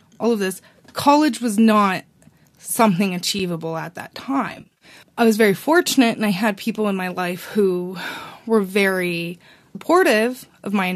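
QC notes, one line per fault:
3.39 s, block of digital silence. Right after "was not something" and before "at that", the audio drops out for about 5.8 ms and snaps back with no fade. The hard edges on both sides make a sharp tick, not an audible gap. The length fits a 256-sample output buffer that was not filled in time, so the output simply held zeros for that block.
4.49–4.85 s, AAC frame loss with concealment. Between "at that" and "I was very fortunate", the speech turns smeared and noisy, with a phasey texture. About 190 ms of audio is missing, scattered over 320 ms, with the longest gaps around 40 ms. The decoder patches each hole by reusing the last good spectrum with altered phase. Because the gaps are short, this covers them as a blurred patch, not a fade to silence.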